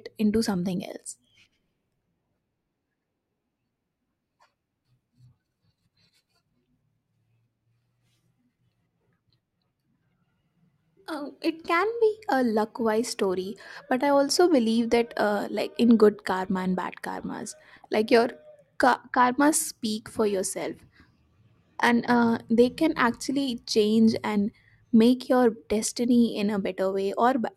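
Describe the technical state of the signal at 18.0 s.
At 18.0 s you're inside a stretch of periodic clock jitter that runs from about 16.01 s to 22.43 s. Something is wobbling the converter's sample clock at a steady rate, somewhere around 100 Hz, so every part of the speech picks up sideband copies offset by that amount above and below. The brighter, higher parts suffer most, giving the voice a gritty, metallic edge that drops out whenever there's a pause.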